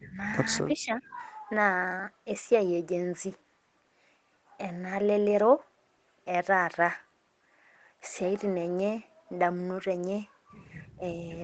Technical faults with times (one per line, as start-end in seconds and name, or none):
0.00-0.17 speech suppressed in double talk
0.75-1.16 speech suppressed in double talk
0.88-1.16 echo leak
10.98-11.02 speech suppressed in double talk